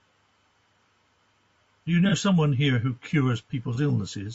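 Throughout the speech, the encoder's short, low-delay frames appear to starve the harmonics of resolution, likely from low-delay AAC compression at a rate consistent with about 32 kbps. The damage is plainly audible: the voice sounds rough and grainy, with noise filling the gaps between harmonics.

At 2.09 to 2.13 s and again at 3.74 to 3.79 s, AAC frame loss with concealment occurs. Each gap fits a single lost frame of about 30 ms, which the decoder patches from the preceding spectrum, leaving a brief smeared, noisy, phasey blur.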